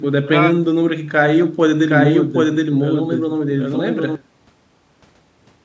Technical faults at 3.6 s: doubled audio track

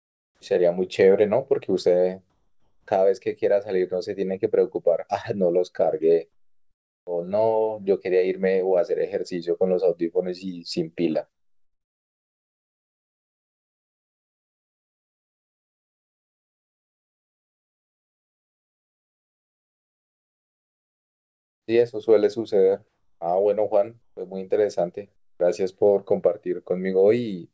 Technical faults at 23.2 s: comfort noise in place of the background

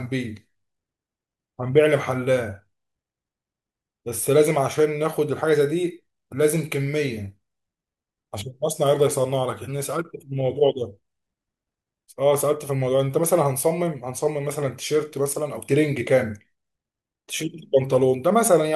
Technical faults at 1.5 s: none

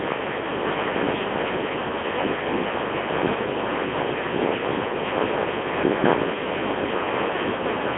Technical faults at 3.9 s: Codec 2 vocoder

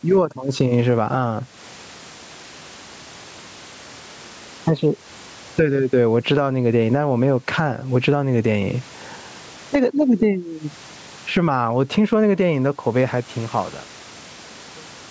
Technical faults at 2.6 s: gain pumping

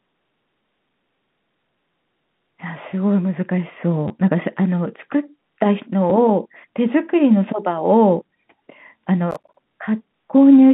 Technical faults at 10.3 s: packet loss with last packet repeated

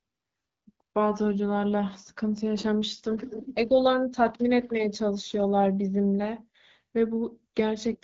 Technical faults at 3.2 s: AMR rate drop

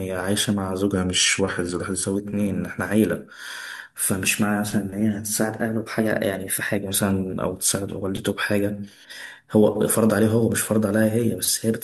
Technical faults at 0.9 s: drift correction step

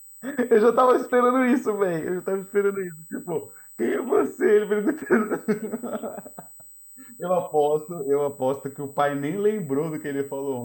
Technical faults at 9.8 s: USB whine

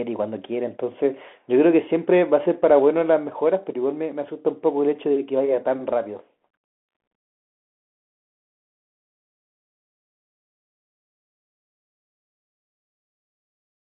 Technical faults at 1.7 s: Bluetooth CVSD headset codec

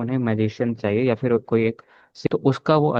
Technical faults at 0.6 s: none

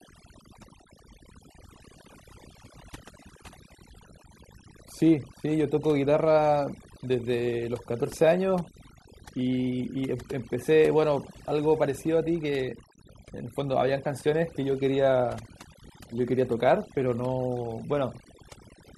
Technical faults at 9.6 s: overdone noise removal

